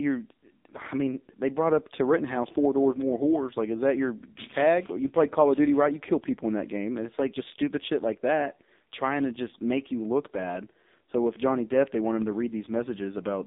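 From start to finish the speech carries the AMR narrowband mobile codec sound: everything sits between 200 Hz and 3.7 kHz, with nothing above. At a bitrate low enough to suggest one of the lowest AMR-NB modes, around 5.9 kbps, the pulse-excited vocal-tract model is stretched thin, so the voice sounds heavily buzzy and synthetic. A spectrogram shows a hard ceiling at 3.7 kHz, an empty strip below 200 Hz, and smeared, blocky harmonics.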